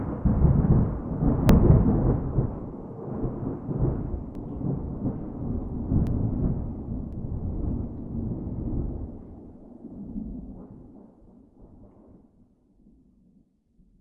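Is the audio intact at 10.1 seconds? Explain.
Yes, the audio is intact at 10.1 seconds, with the sound running through that moment without any dropout, click, distortion or other technical fault.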